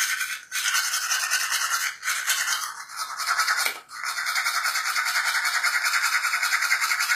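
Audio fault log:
throughout, HE-AAC compression: the treble is likely rebuilt from copied lower bands under a coarse envelope rather than coded directly, so the upper spectrum is a synthetic stand-in. The damage is plainly audible, nothing reaches above 14.9 kHz, and this fits a bitrate near 24 kbps.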